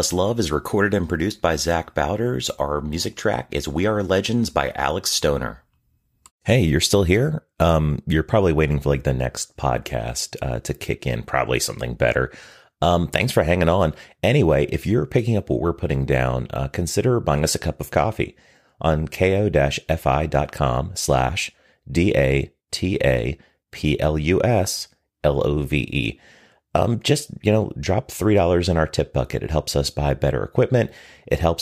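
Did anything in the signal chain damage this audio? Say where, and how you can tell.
No, nothing along the signal chain has left audible damage on this speech recording, and the signal holds steady and continuous throughout.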